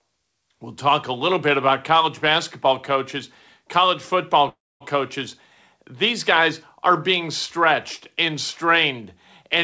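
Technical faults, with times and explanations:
4.49 to 4.83 s, call audio freeze, just after "college basketball coaches college". The last sound is drawn out and fades, and about 250 ms of that is silence. The audio then resumes where it stopped. Nothing is lost, but playback now runs about 316 ms late. The likely cause is packets held up in transit, leaving the jitter buffer empty. The receiver fills the wait and then continues.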